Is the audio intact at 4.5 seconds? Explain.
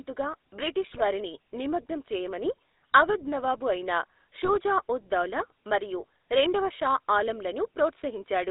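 No. Between 4.45 and 4.51 s, just after "చేయమని అవధ్ నవాబు అయిన" and before "ఉద్ దౌలా మరియు రెండవ", GSM bit errors occur: corrupted bits reach the decoder, and wrong filter, pitch or gain parameters make it rebuild the speech from bad data. The roughly 60 ms disturbance fits two damaged 20 ms frames. It sounds like a brief squawk and gargle, with a distorted spectrum and an unsteady level, before the speech recovers.

The GSM full-rate codec is also active at that moment, as it is throughout. The speech is reduced to a vocal-tract filter driven by a sparse, regularly spaced pulse excitation, a coarse scheme that fits a 13 kbps full-rate coder. The band is confined to about 300 Hz to 3.7 kHz, so the voice sounds muffled and telephone-like, with a plainly audible buzzy, gravelly roughness.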